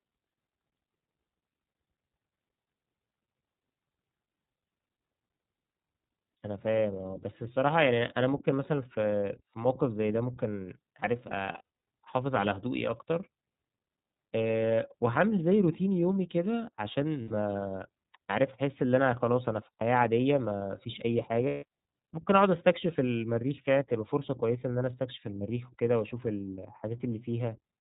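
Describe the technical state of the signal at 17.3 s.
At 17.3 s the audio sits inside a burst of lost iLBC frames running from 17.22 to 17.31 s, a gap of about 90 ms that fits three missing 30 ms frames. The decoder fills the hole by repeating the last pitch cycle blended with noise, so the sound turns into a held, faintly buzzy vowel before clean decoding resumes almost immediately afterwards. On a waveform the span shows a suspiciously regular, repeating cycle; a spectrogram shows frozen, smeared harmonics with a noisy haze between them.

The moment also carries the iLBC codec's own character, present across the whole clip at 13.33 kbps in 30 ms frames. This narrowband coder keeps nothing above 4 kHz and codes each frame's excitation independently, which gives this speech a plainly audible rough, slightly synthetic edge. A spectrogram shows a hard ceiling at 4 kHz with empty space above it, and the waveform looks slightly coarsened rather than visibly broken.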